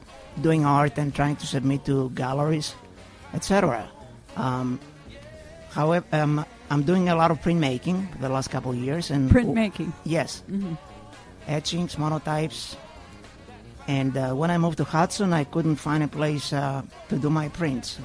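Nothing in the audio stands out as a technical fault; there's no moment where anything breaks, drops out or misbehaves.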